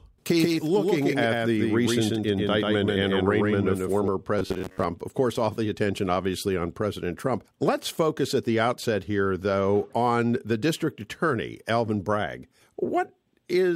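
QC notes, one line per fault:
0.00–4.08 s, doubled audio track: a dry full-band copy trails around 150 ms behind, about 5 dB quieter, likely a second capture path; spectrogram shows every feature ghosted rightward.
4.39–4.84 s, robotic sound from repeated short buffers, before "of course all the": 93.8 Hz metallic buzz from roughly 10.7 ms chunks likely repeated, skipping most audio; waveform shows identical repeating cycles.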